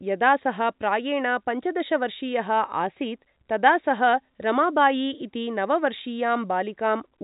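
Nothing stood out on listening to this speech recording, which has the narrow band of G.711 telephone coding with nothing above about 3.8 kHz.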